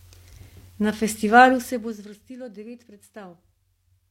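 From 1.49 to 2.13 s there is zipper noise. The level drops about 20 dB in unsmoothed 1 dB steps. Each step ticks audibly.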